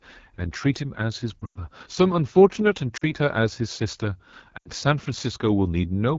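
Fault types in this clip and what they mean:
AMR wideband (HD Voice) codec: The speech is squeezed through a model of pulses driving a vocal tract filter, with only shaped noise above 6.4 kHz, and the rough, raspy texture points to one of the lowest rates, such as 8.85 kbit/s. On a spectrogram, harmonics look smeared and grainy below 6.4 kHz, with a diffuse noisy band reaching a hard ceiling near 7 kHz. The waveform looks coarsely modelled rather than clean.
Lost AMR speech frames: Damaged frames were dropped, so the decoder filled the gaps by repeating its last good pitch and vocal tract settings at falling gain. From 1.40 to 1.59 s about 120 ms is lost in bursts, with a run of up to 100 ms. Shorter gaps occur from 2.97 to 3.12 s and from 4.57 to 4.68 s. Each gap drops quickly toward near silence. On a spectrogram, frozen harmonics fade out. The waveform shows the envelope sagging, then recovering weakly.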